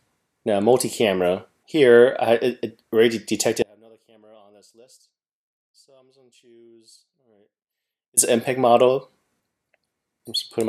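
From 3.62 to 8.17 s only a faint trace remains: an audio dropout to a faint residue, likely a lost feed into a still-live path.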